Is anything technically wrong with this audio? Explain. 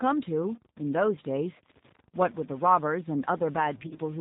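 Yes, there are three faults. Throughout, a data line was likely stuck at one bit value, so about half the samples are offset, giving distortion and noise that fills the pauses. The speech also passed through the G.729 codec at 8 kbit/s, which rebuilds it from a vocal tract filter and pulses, cutting everything above 4 kHz and leaving it plainly rough and synthetic. From 3.83 to 4.01 s there is VoIP packet loss concealed by the speech codec: about 70 ms of audio went missing in runs of up to 20 ms spread over 160 ms. The decoder stretched its last pitch and filter into a fading buzz or coloured noise, and the speech stays weak until it recovers.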